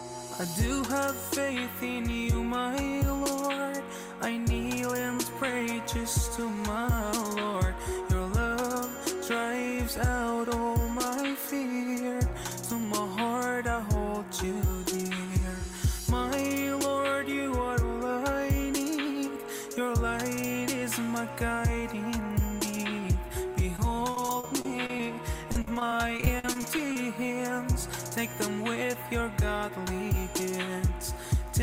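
From 23.76 to 25.00 s, and again from 25.52 to 26.96 s, the sound turns choppy, with a robotic, stuttering edge. This is repeated packet loss (robotic sound): audio arrived late or not at all, over and over, and each hole was filled by extending the preceding sound. The holes reach 30 ms in the first stretch and 44 ms in the second, and concealment covers about 14% and 17% of each stretch.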